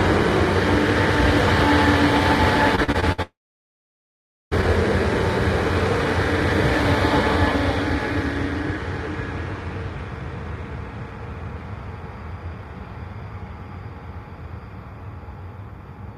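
Everyday sound recording with two network-related faults. From 2.75 to 3.20 s there is repeated packet loss (robotic sound): five short gaps, the longest about 59 ms, are patched by extending the preceding sound, so roughly 37% of that stretch is synthetic fill and the audio turns choppy with pieces missing. Immediately after, from 3.22 to 4.53 s, about 1.3 s of audio is absent. The last sound is carried on only briefly before about 1.19 s of silence, and the recording resumes without the lost portion, the likely result of a long network dropout.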